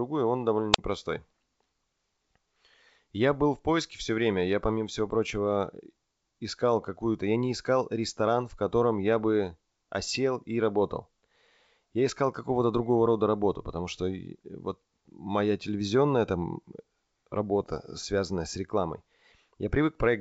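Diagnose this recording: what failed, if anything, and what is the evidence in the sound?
The first failure is at the radio link, before any digital stage. Just after "он довольно", from 0.73 to 0.78 s, the hiss rises briefly. Then the output drops to near silence for about 41 ms before the speech returns. This is a wireless microphone squelch dropout. The analogue FM carrier faded, and the receiver sensed the weak signal and gated its output shut. It reopened once the carrier recovered.

The second failure is on the transmission path, in the coded stream. Between 10.08 and 10.17 s, after "в котором я бы" and before "и работал", there is a cluster of pops and rough, gritty bursts with brief level jumps. These are bit errors on an ADPCM link, with a low error rate of a fraction of a percent. The link here is the G.722 wideband path, which carries the speech cleanly elsewhere. Each flipped bit corrupts the decoder's step size and prediction, so the damage smears over several milliseconds. 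Roughly a hundred milliseconds is affected, which fits a handful of hit frames.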